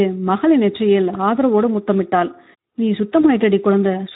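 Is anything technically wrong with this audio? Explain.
Yes, there are two faults in this speech clip.

Throughout, the voice sounds hoarse and grainy, with plainly audible noisy codec damage. This is Speex codec damage: the CELP coder has too few bits to model the excitation properly, which fits a setting around 11 kbps.

From 3.21 to 3.25 s, the voice briefly smears into a short, fading sound and stays weak or distorted as it resumes. This is VoIP packet loss concealed by the speech codec. About 20 ms of audio went missing, and the decoder filled it by extending its last pitch and filter at falling gain.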